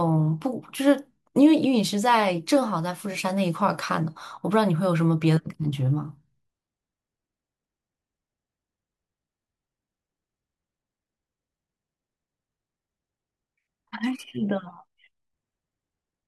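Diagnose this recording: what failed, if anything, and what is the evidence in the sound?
Nothing failed; no faults heard.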